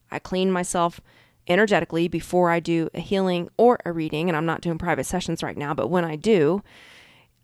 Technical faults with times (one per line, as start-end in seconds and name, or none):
none